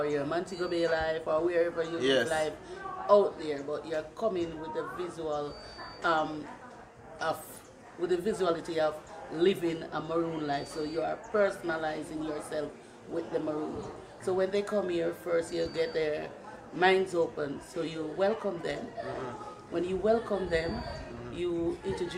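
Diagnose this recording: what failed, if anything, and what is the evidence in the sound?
Nothing failed at any stage of the chain, and there is no fault evidence anywhere in the sound.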